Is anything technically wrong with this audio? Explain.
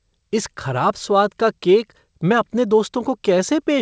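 No, nothing in this speech is technically wrong. It has come through a call path whose content stops at about 8 kHz, which fits a wideband call codec such as G.722.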